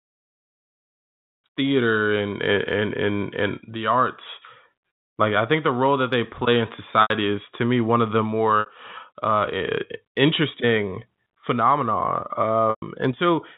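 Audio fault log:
7.02 to 12.82 s, packet loss with pitch repetition: audio drops out for 80 ms at 7.02 s (after "that they play in"), 60 ms at 8.6 s (after "me one of the") and 120 ms at 12.7 s. Each gap is filled by looping the last pitch period, heard as a brief buzzy hold that fades over about 50 ms, so the longest gap sinks toward silence.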